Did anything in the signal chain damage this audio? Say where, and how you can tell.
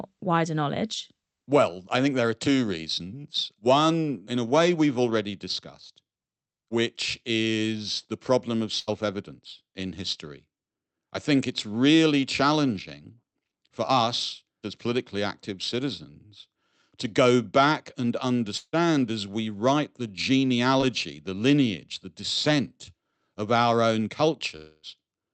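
Yes, and it's all on the network side. At 8.79 to 8.89 s, right after "is the problem of", there's a burst of packet loss. About 80 ms never arrived, so the decoder stretched the last sound into a fading hold, then jumped ahead to "evidence in history" with that stretch gone.

Two long network dropouts follow. After "to go back and" at 18.57 s, the sound is held and fades for about 155 ms, goes silent for about 30 ms, then picks up at "as we write the" near 18.75 s. At 24.56 to 24.85 s, after "descent of our own", a fading hold fills nearly the whole gap. The likely cause is the stream stalling outright.

There's also a short concealed packet loss at 20.81 to 20.84 s. Roughly 20 ms went missing and got patched by extending the preceding sound and blending back in, so you hear a quick smear or wobble rather than a gap.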